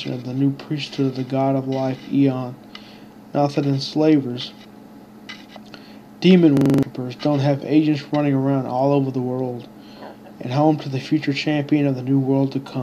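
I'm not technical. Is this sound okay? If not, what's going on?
No. At 6.57 seconds, the audio gets stuck. A tiny slice, about 43 milliseconds long, plays six times in a row until 6.83 seconds. It sounds like a fast stutter, about 23 repeats per second. This is a system hang loop. The computer briefly froze, and the sound hardware kept replaying the last chunk it held, which fits a 2048-sample buffer. About a third of a second of real audio is lost.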